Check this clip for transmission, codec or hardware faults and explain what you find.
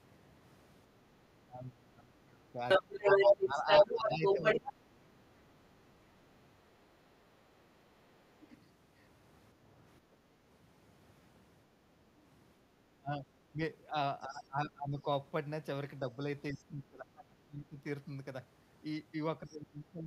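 The clip has two echo-canceller faults, both on speech.

Speech suppressed in double talk at 1.45–5.19 s, 12.98–15.07 s, 16.16–17.85 s and 19.46 s to the end. The voice dips by up to roughly 25 dB, likely because the canceller couldn't separate the talker from the loudspeaker echo and turned both down. On a spectrogram this shows as faded or missing bands. On a waveform it shows as a shrunken envelope.

The other side's voice is leaking through at 2.68–4.71 s, about 10 dB louder than the talker. It likely comes from residual loudspeaker echo. Faint scraps also leak through at 8.42–8.47 s, 14.2–14.43 s and 19.49–19.57 s. On a spectrogram these appear as a second, unrelated set of harmonics.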